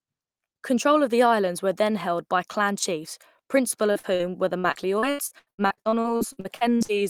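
Brief smears and wobbles in the speech at 3.91, 3.99 and 4.15 s, just after "by clan chiefs principal" and before "were the", are short concealed packet loss: each roughly 40 ms hole was patched by extending the preceding sound. From 4.59 to 6.91 s the speech turns choppy and robotic, with pieces missing. This is repeated packet loss, where holes up to 81 ms recur rapidly and concealment fills about 35% of that stretch.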